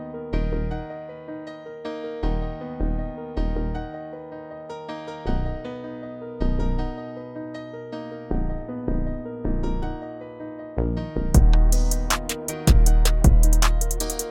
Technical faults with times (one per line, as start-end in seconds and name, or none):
9.83 repeated buffer